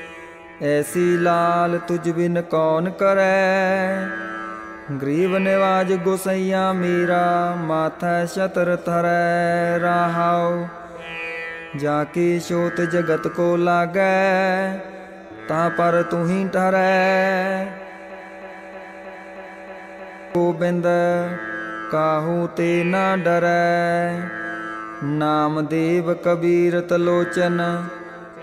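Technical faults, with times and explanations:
18.10–20.35 s, broken-record loop: a 315 ms fragment repeats exactly, back to back, seven times, and the audio due in that span is lost; the player or stream likely stalled and kept resending its last fragment. Spectrogram and waveform show identical blocks every 0.31 s.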